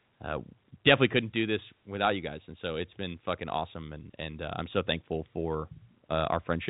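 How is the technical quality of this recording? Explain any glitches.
Nothing here counts as a glitch: the speech comes through as you'd expect from an ordinary G.711 telephone line, with the narrow, phone-like bandwidth that format always has.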